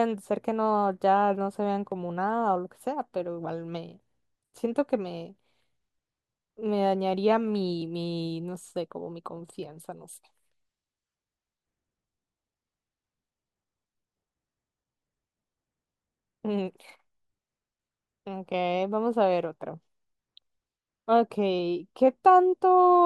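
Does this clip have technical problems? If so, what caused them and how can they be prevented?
No, the speech signal comes through steady and intact, with nothing in it that points to a problem in capture, processing or playback.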